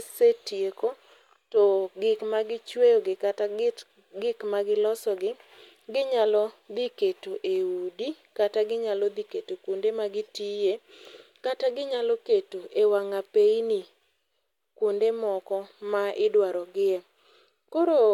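Listening to the speech here, nothing stood out as a technical fault at any point.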